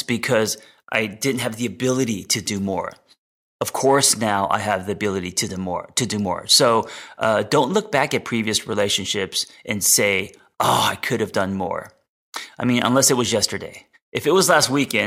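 No technical faults are audible.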